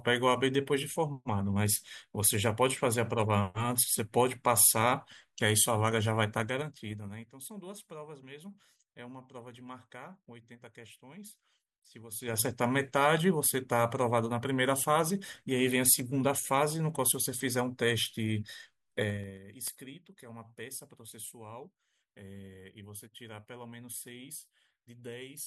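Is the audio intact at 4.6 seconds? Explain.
Yes, the speech at 4.6 seconds is intact, with no audible fault at that moment.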